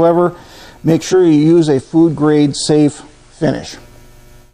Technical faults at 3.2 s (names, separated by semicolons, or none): digital radio blending to analogue